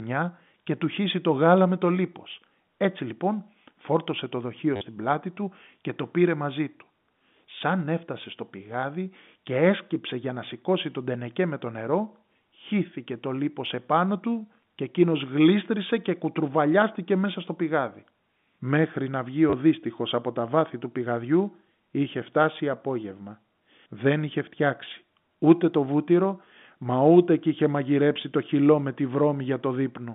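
Packet loss with the last packet repeated hits this telephone speech recording at 4.76 s for about 50 ms and at 19.5 s for about 30 ms. In each gap the receiver keeps replaying the most recent packet until fresh audio arrives. The loops don't line up with the pitch period, so the run buzzes near 100 Hz, which fits 10 ms packets. The result is a brief robotic stutter over the narrow G.711 line band.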